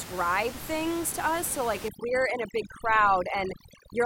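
From 1.88 s to the end, overdone noise removal cuts bands near the noise estimate. The background breaks up into twinkling specks.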